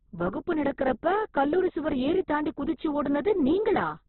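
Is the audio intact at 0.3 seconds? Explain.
No. At 0.3 s, as across the whole clip, the speech carries heavy damage, likely from Opus compression. It sounds rough, grainy and muffled, with nothing above about 4.1 kHz, which points to a narrowband encode at a very low bitrate, around 8 kbps. With so few bits, the encoder fills bands with folded or noise-like energy instead of true detail. On a spectrogram, a hard ceiling near 4.1 kHz runs the full length, with smeared, noisy texture below it.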